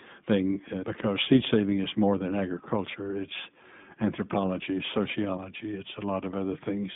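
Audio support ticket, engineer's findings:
iLBC codec, throughout: band cut above 3.8 kHz, rough, synthetic speech texture from 20 ms frames coded independently, which fits the 15.2 kbps mode. Plainly audible codec damage, not simple band-limiting.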